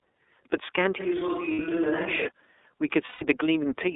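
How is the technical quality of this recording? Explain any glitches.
The recording is narrowband and codec-coloured throughout, with an acoustic change in the middle and two dropouts.

The whole clip carries iLBC codec damage. The band runs only from about 300 Hz to 3.6 kHz. Each 30 ms block is coded on its own, and the speech sounds plainly rough and synthetic. The roughness fits the 13.33 kbps mode.

From 1.01 s to 2.26 s the sound suddenly turns roomy and hollow. It is about 5 dB quieter, with thinner bass and room noise about 35 dB below the speech. This is likely a switch to a distant microphone. The return is equally abrupt.

At 1.53 s, for 60 ms, and at 3.05 s, for 150 ms, there are lost iLBC frames. The decoder repeats the last pitch cycle blended with noise, which gives a brief buzzy, held vowel. The first gap fits two lost frames and the second fits five. Normal speech resumes almost immediately after each.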